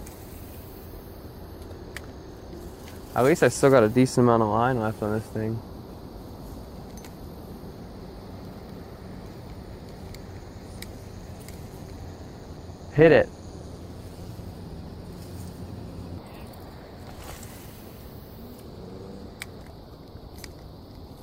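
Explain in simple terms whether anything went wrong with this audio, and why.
Something does go wrong, from about 11.66 to 14.40 seconds. In that stretch the sound picks up a metallic buzz, with extra tones around each note, that's a textbook case of overlap-add ripple. The audio was chopped into short overlapping slices and stitched back together, but the overlaps didn't blend evenly, so the loudness dips and swells with every slice, roughly a couple of hundred times a second.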